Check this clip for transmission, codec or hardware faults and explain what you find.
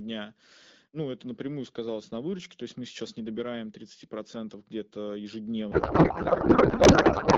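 One fault is present: a codec payload misread from 5.71 s to the end of the clip. The decoder misplaces bit fields, consistent with octet-aligned AMR frames read as bandwidth-efficient, so the speech turns into garbled noise and warble that barely follows it.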